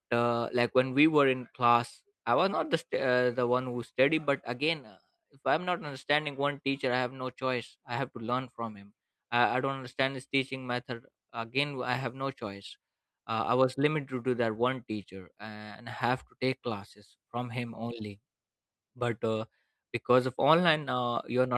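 Listening through the speech, nothing stood out as a technical fault at any point.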